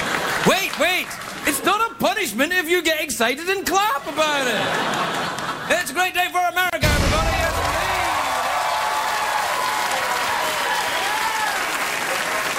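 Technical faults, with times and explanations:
6.70 to 6.73 s, gap at a join of encoded pieces: a silence of about 30 ms cuts into continuous sound, which then resumes where it stopped. Two separately encoded pieces were joined with their start delay and end padding left in. The waveform shows a flat dropout with smeared edges; the spectrogram shows a narrow vertical blank band.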